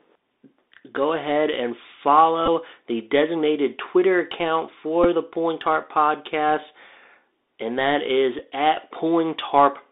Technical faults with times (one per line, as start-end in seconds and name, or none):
0.00-9.91 Bluetooth CVSD headset codec
2.46-2.48 Bluetooth headset packet repeated
5.04 Bluetooth headset packet repeated
8.39 Bluetooth headset packet repeated